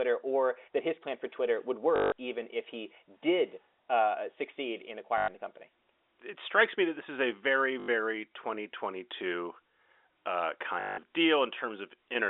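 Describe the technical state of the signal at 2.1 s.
At 2.1 s you're inside a stretch of packet loss with the last packet repeated, running from 1.96 to 2.12 s, just before "even if he did". About 160 ms of audio went missing, and the receiver kept replaying the last good chunk to fill the gap. That fits eight 20 ms packets, so the repeats buzz at around 50 Hz. It comes across as a brief robotic stutter on the narrowband telephone sound.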